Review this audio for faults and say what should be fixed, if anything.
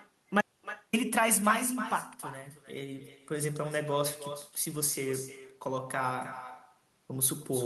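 Echo with no canceller runs through the whole speech recording. Each phrase is followed roughly 300 ms later by a copy about 11 dB quieter and thinner. That is the far end's loudspeaker feeding its microphone, with nothing subtracting it before it returns. On a spectrogram, every syllable has a faint duplicate offset by that delay. The waveform shows small trailing envelopes after each burst. Enabling acoustic echo cancellation at the far end, or having that side use headphones, would prevent it.

An audio dropout to silence runs from 0.41 s to 0.93 s, losing 520 ms of speech. The signal cuts off mid-flow and returns abruptly. The gap contains no room tone or hiss at all, which points to the input feed being lost while the recorder kept writing silence, likely from a device disconnect or momentary mute. On a waveform this appears as a flat line. On a spectrogram it is a dark vertical band spanning all frequencies, including the band-limited region below 12 kHz carried by the Opus call path. 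Securing the input connection and monitoring for muted or lost devices would prevent it.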